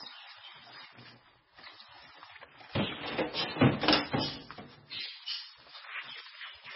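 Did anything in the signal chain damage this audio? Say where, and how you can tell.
Yes, at the codec stage: the whole recording carries heavy MP3 compression damage, likely from an MP3 encode at a very low bitrate, roughly 16 kbps. Nothing survives above 5.6 kHz, so a spectrogram shows a flat, hard ceiling there from start to finish. Below it, weak components flicker on and off frame by frame as the starved encoder discards them, which you hear as a watery swirl and see as patchy, holed texture. Transients look smeared in the waveform.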